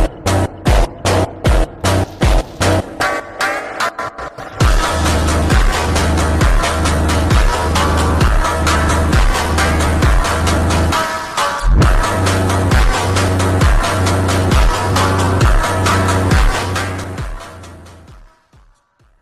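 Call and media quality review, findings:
No faults found.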